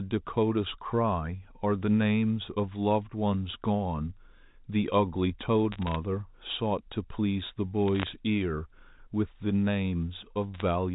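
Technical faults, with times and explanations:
5.72–5.96 s, 7.88–8.13 s and 10.54–10.62 s, bit errors on a digital phone line: three short bursts of sharp ticks and crackle sit on top of the speech, which itself stays intact underneath. On the G.711 A-law line, a few bits in every thousand were flipped. Because each 8-bit code is one sample, a flipped high-order bit, or a flipped sign on a loud sample, turns that single sample into a sudden large jump, heard as a click rather than a dropout.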